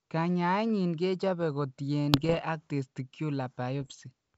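Speech with bit errors on an ADPCM link, from 2.13 to 2.45 s just after "kechope ko" and again from 3.82 to 3.95 s, at roughly 0.7 and 1 percent of bits. Each flipped bit throws off the decoder's step size and predictor, leaving rough, popping bursts and brief jumps in level over an otherwise clean 7 kHz G.722 band.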